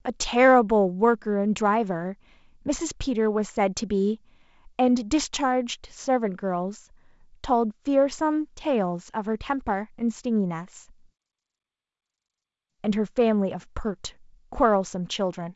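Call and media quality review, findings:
No faults found; G.722 wideband path audible as expected, speech band-limited near 7.7 kHz with light upper-band coding hiss, consistent with one of its reduced-rate modes.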